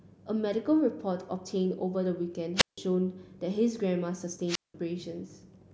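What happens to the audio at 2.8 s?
Just before 2.8 s the speech returns from a short hole: from 2.56 to 2.78 s hiss swells briefly, then the output drops to near silence for about 160 ms before the speech comes back. This is a wireless microphone squelch dropout. The radio link from the analogue FM transmitter weakened enough that the receiver's squelch gate shut the audio off rather than pass static, reopening once the signal recovered around 2.78 s.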